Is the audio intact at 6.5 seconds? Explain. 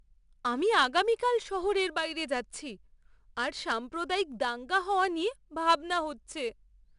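No. At 6.5 seconds the speech carries 4-bit ADPCM compression, which runs through the whole clip. Each sample is stored as a small 4-bit step from a prediction, with a step size that adapts. The resulting error is a gritty hiss that rises and falls with the speech level. Sharp attacks sound roughened. Nothing is heard above 10.6 kHz, so the top end is dulled. The damage is plainly audible and fits a rate near 89 kbps.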